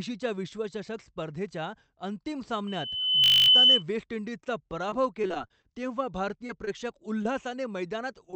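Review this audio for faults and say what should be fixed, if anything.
The worst problem is loudspeaker feedback squeal from 2.67 to 3.83 s, starting right after "विश्वचषक स्पर्धेच्या अंतिम". A mic is hearing the speaker it feeds, and at 3 kHz the loop gain tops unity, so that tone feeds on itself. It climbs for roughly 0.7 s until it sits something like 15 dB over the speech as a piercing whistle. To prevent it, get the talker on headphones or pull the monitor gain down, ideally with a notch at 3 kHz.

Inside that squeal, from 3.24 to 3.48 s, there's a system hang loop. The machine or driver stalled while the audio hardware kept replaying its ring buffer. A 20 ms slice repeats 12 times, so you hear a flat buzz at 50 Hz, which fits a 20 ms buffer. Roughly a fifth of a second of real audio is gone underneath it. The fix is to track down the driver or CPU stall and keep anything blocking off the audio thread.

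From 4.90 to 5.79 s it's repeated packet loss, and it sounds choppy and robotic. Packets kept missing or arriving late, and each hole was patched by stretching the last bit of sound. The holes are short, 25 ms at most, but they come close together. About 100 ms is missing altogether, so around 14% of that stretch is concealment rather than real signal. Prevention: a steadier network connection, a deeper jitter buffer, and forward error correction switched on.

There are also four short concealed packet losses, at 6.47–6.51, 6.65–6.69, 7.23–7.27 and 8.31–8.34 s. Each loses about 20 ms, which the decoder filled by extrapolating from the sound just before. Each then blends back into the real audio, so you get a quick smear or wobble rather than a gap. Anything brief in those spots can be swallowed. These come down to the same network issue, so the same fixes apply: a better link, FEC and a bit more buffering. 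The 8 kHz bandwidth ceiling you hear throughout comes from the call codec path and isn't part of these faults.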